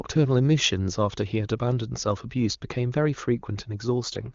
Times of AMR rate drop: 4.01-4.34

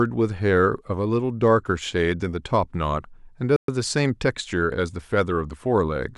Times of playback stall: 3.56-3.68

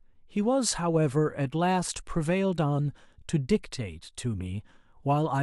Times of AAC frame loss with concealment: none

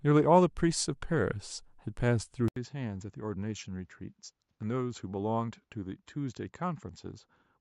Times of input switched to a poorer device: 2.48-7.61

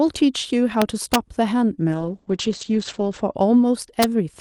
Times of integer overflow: 0.82-1.15, 4.02

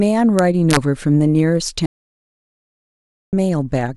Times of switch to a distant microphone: none

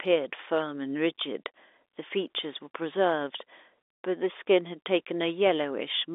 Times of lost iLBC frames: none

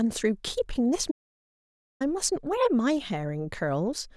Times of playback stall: 1.10-2.02

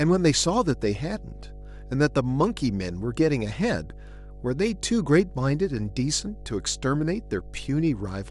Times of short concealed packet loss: none

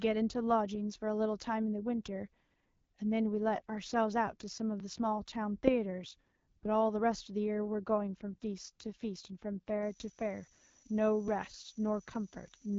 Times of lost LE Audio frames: none

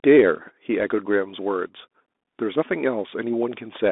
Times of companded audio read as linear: none

